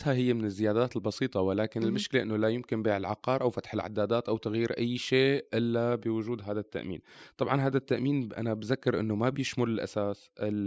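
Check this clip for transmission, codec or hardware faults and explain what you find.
The speech signal holds steady throughout, with no transmission, codec or hardware faults audible anywhere in the recording.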